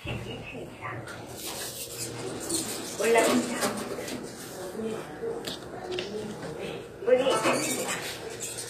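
Throughout, the treble sounds gritty and metallic, with nothing above 14.9 kHz; this is likely HE-AAC compression rebuilding the upper spectrum, which fits a bitrate near 24 kbps.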